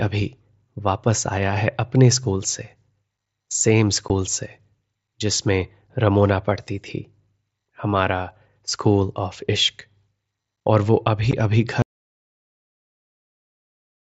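Speech carried over a wideband mSBC Bluetooth headset link, with light grain on loud sounds. Unconcealed Bluetooth headset packet loss occurs at 4.08 s and 11.31 s. Each time about 15 ms of audio vanishes, leaving an abrupt hole. An audio dropout to silence starts at 11.82 s and lasts to the end. The sound cuts off into silence, with no room tone. A failed link or disconnected headset is the likely cause.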